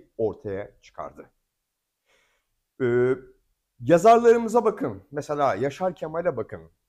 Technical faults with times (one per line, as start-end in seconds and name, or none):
none